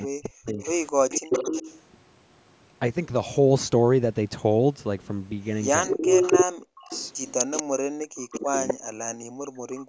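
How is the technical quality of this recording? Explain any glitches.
The recording is speech on a call link with three echo-canceller problems. The speech is repeatedly pushed down, there is audible echo, and the room sound briefly drops out. The band stops at 8 kHz, as expected from the call's microphone processing.

Speech suppressed in double talk occurs from 0.0 to 0.59 s, 1.24 to 1.34 s, 5.87 to 6.95 s, and from 8.08 s to the end. The likely cause is an echo canceller that could not separate the talker from loudspeaker echo while both sides spoke, so it turned everything down. The voice dips by as much as about 40 dB and breaks up in pieces.

Echo leak is heard at 0.6 to 1.82 s, 5.85 to 7.63 s, and 8.34 to 8.74 s. It is likely caused by a speakerphone whose canceller let some of its microphone pickup return to the line. The result is a copy of the voice delayed by 253 ms, about 5 dB below the speech, and about as loud as the speech from 5.85 s.

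Background gated by the echo canceller occurs at 7.68 to 7.8 s. While the loudspeaker was active, the canceller clamped the microphone hard. The room sound drops by about 40 dB for a few hundredths of a second, then returns when the canceller releases.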